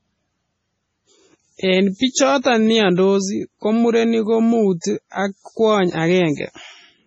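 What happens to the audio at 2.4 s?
A pre-echo runs from 2.41 to 2.45 s. A short hiss, about 40 ms long, comes just before a sharp onset in the speech. The codec spread its block's quantisation noise across the quiet moment ahead of the attack. That onset sounds soft and smeared.

The surrounding sound has heavy MP3 compression damage. Nothing remains above 9.1 kHz, and weak detail swirls and flickers from frame to frame, giving a watery texture. The likely cause is MP3 encoding at a very low bitrate, consistent with about 24 kbps.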